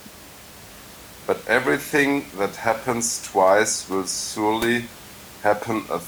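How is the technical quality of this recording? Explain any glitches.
No technical faults are audible.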